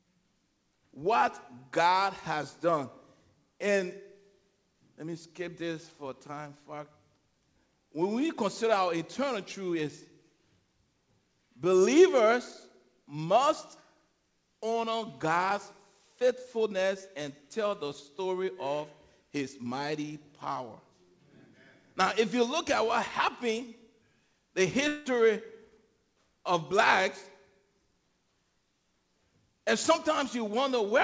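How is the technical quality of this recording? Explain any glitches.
One glitch stands out, heard through a call path whose sound stops at 8 kHz, which fits a wideband G.722-style codec. Long network dropout, 24.88 to 25.08 s: the last sound stretches into a fading buzz for about 0.2 s rather than falling silent, then the audio resumes with roughly 0.18 s gone. This is likely a run of lost packets, with the receiver inventing filler until real audio arrived again.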